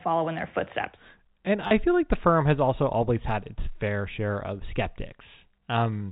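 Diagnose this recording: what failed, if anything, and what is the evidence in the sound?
Packet loss with last packet repeated, at 1.67 to 1.71 s, between "in their footsteps and" and "feel like the firm". This is a network-stage failure. Roughly 40 ms of audio never arrived, and the receiver filled the gap by replaying the last good packet. The result is a brief robotic stutter. Each replayed chunk is joined without regard to the pitch period, and the loop buzzes near 100 Hz, which fits 10 ms packets. The G.711 A-law telephone band carries through the gap unchanged.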